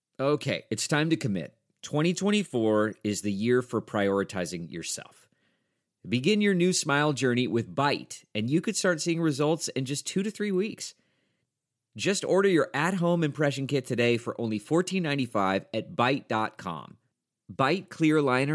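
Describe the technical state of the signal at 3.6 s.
At 3.6 s the speech signal is intact, with no fault audible at that point.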